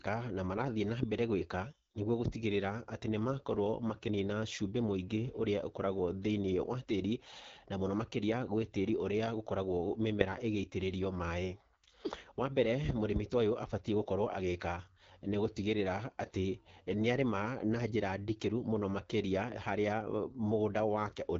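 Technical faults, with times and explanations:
Throughout, AMR wideband (HD Voice) codec: the speech sounds rough and raspy, with a hissy, synthetic top and nothing above 7.4 kHz. The vocal tract model keeps too little detail here, which points to one of AMR-WB's lowest rates, around 8.85 kbit/s.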